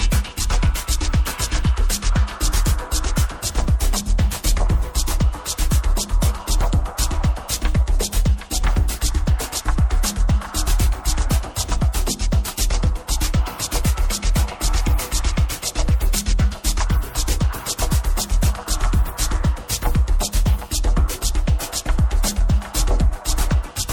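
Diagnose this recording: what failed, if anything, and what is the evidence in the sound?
The failure sits at the codec stage: MP3 compression, audible from start to finish. The treble stops at a fixed ceiling. Weak detail flickers in and out, leaving a watery, swirling texture and smeared attacks. The likely cause is a starved encoder, which fits roughly 64 kbps.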